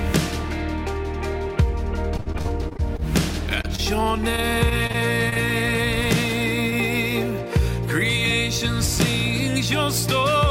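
From 2.17 to 3.04 s, repeated packet loss leaves a run of holes, the longest 57 ms, each patched by extending the previous sound. About 28% of the stretch is concealed, producing choppy audio with pieces missing rather than a single blip. Brief short concealed packet loss follows at 3.62–3.65 s and 3.75–3.80 s, where roughly 20 ms of audio each time is filled in and blended back. Each is heard as an isolated smear or wobble. A second spell of repeated packet loss runs from 4.36 to 5.38 s. Its gaps are shorter, the longest 26 ms, and only about 11% is concealed. One more short concealed loss at 6.70–6.74 s gives a lone momentary smear.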